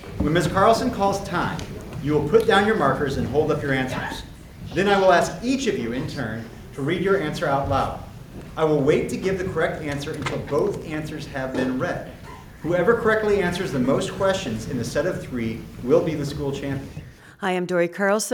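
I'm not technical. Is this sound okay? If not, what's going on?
No. At 10.82 s there's a DC step, a low thump as the waveform's zero line shifts, and the shift lasts until 15.90 s. Unlike a dropout, the sound itself never breaks.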